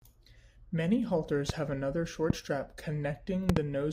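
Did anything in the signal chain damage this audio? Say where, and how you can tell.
Yes: voltage spikes, likely from analogue wiring or static, add loud pops at 1.49–1.52, 2.30–2.32 and 3.49–3.59 s (double), roughly 15–20 dB above the continuing speech.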